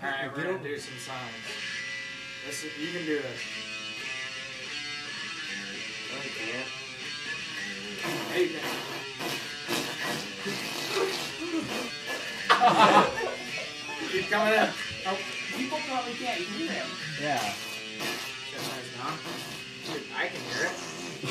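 At 1.79, 5.73–5.75, 7.25, 11.9 and 14.72–14.74 s, short runs of compressed frames are skipped in decoding. Each time the audio jumps ahead, about a tenth of a second, nearer a fifth at 7.25 s and a twentieth at 14.72 s.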